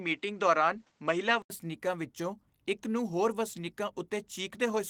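From 0.0 to 1.5 s the speech is band-limited, with nothing above about 8.4 kHz, and carries a faint added noise floor about 40 dB down. This likely reflects an input switched to a poorer device. An 80 ms silence marks the switch at 1.5 s, with loudness unchanged.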